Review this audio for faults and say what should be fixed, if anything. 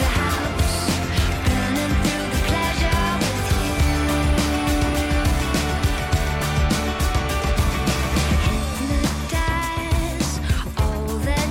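No faults found; nothing needs fixing.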